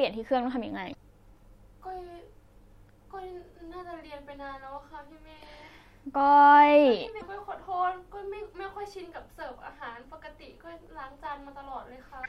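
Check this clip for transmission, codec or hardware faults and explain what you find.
Three bursts of damaged data in a compressed stream, at 0.90–0.95 s, 7.17–7.22 s and 12.22–12.26 s, each about 44 ms. Corrupt bytes make the decoder misread frames and resync, giving a brief glitch in the speech.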